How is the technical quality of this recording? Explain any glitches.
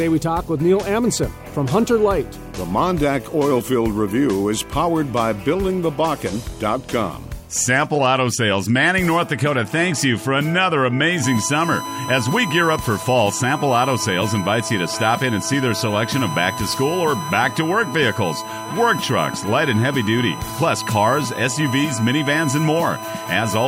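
The recording is marred by one clear problem in its second half. From 11.24 s to the end there's USB whine, a steady 1 kHz tone sitting only around 10 dB under the programme. The bus's 1 ms frame clock leaks through power or ground, so you hear a fixed-pitch whistle.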